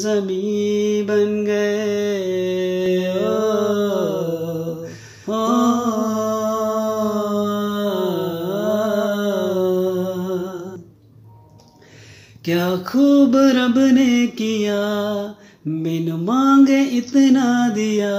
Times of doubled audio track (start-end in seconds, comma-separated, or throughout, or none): 2.86-10.76